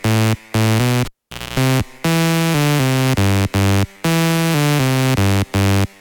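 A music clip in which a live cable is pulled and plugged in again between 1.05 and 1.60 s: a pop starts about 495 ms of near silence, 255 ms of 60 Hz mains buzz sounds while only the tip touches, then another pop brings the music back.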